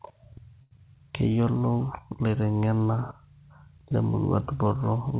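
From 0.62 to 0.73 s the speech freezes on one sound, held for about 90 ms with a slight buzz or dip before carrying on from exactly where it stopped. This is a short stall from a late packet: the jitter buffer ran dry, the receiver stretched the last audio, and the delay grew by 90 ms, so nothing was lost.

Just after, between 0.77 and 0.80 s, there is a quick smear where a sliver of speech seems to drop out. This is short concealed packet loss: 40 ms of audio never arrived, only about 7 ms was patched by extending the previous sound, and the receiver trimmed its delay by roughly 30 ms, so part of a sound is simply gone. Through both faults the band stops at 4 kHz, which points to G.711 mu-law on the call path.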